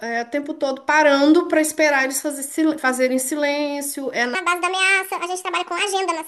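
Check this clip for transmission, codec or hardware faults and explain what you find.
One fault: a section at the wrong speed, from 4.35 s to the end. That stretch was likely played back against the wrong clock, running 1.52 times too fast, so the speech suddenly turns hurried and jumps up in pitch by roughly seven semitones.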